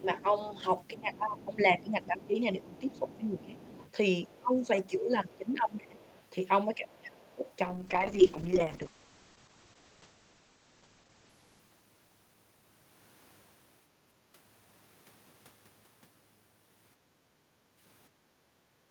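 Speech suppressed in double talk runs from the start to 7.48 s. The talker's level sinks by roughly 20 dB in places, for around five seconds in total, and the voice thins and breaks up. The likely cause is the echo canceller, unable to separate the talker from loudspeaker echo, turning both down.

The other side's voice leaking through overlaps this, from 0.79 to 4.4 s at roughly 25 dB below the talker, then more faintly, about 35 dB down, from 5.33 to 6.22 s and briefly at 7.29 s. A second, quieter voice sits underneath, likely loudspeaker playback the canceller failed to remove fully.

A call bitrate drop follows from 7.66 to 13.21 s. The encoder falls from 48 to 9 kbps, staying at the bottom for about 3.2 s, and the audio bandwidth narrows from 20 kHz to 8 kHz, so the speech turns muffled and coarse before brightening again.

Background gated by the echo canceller starts at 16.97 s and lasts to the end. 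While the loudspeaker plays, the canceller pulls the microphone down by about 8 dB, and the room sound dips. Within it, at 18.58 s, a short stretch of speech suppressed in double talk drops the voice by roughly 20 dB.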